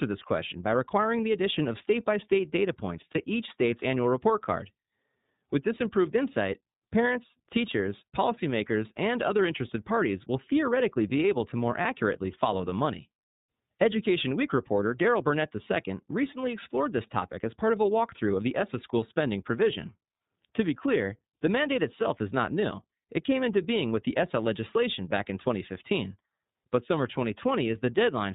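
From the start, the speech passes through the iLBC codec. Nothing above 4 kHz survives, so the sound is narrowband. The coding damage is plainly audible: a rough, slightly synthetic edge. This fits iLBC's 13.33 kbps mode with 30 ms frames.

At 3.11 to 3.19 s comes the first dropout, lost iLBC frames. The decoder fills the hole by repeating the last pitch cycle with added noise. It sounds like a brief, buzzy held vowel. The length fits one lost 30 ms frame.

At 11.81 to 11.86 s, another iLBC frame is lost. The same concealment happens again: a short buzzy or breathy stretch replaces the missing sound. Since iLBC frames are coded independently, the speech recovers almost at once afterwards.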